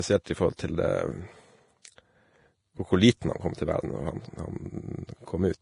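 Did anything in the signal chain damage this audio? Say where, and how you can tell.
Yes. Vorbis compression runs through the whole speech clip: nothing reaches above 10.5 kHz, and the treble is hissy and grainy. This is likely heavy codec damage from Vorbis at a low rate, which fits about 31 kbps, with fine detail coarsely quantised into noise.

Pre-echo at 0.56 to 0.59 s, just after "i forhold", and again at 1.96 to 1.98 s, smears 29 ms and 25 ms of hiss ahead of sharp attacks. This is also codec damage: the quantisation noise is spread across each transform block, so it fills the quiet moment before the attack.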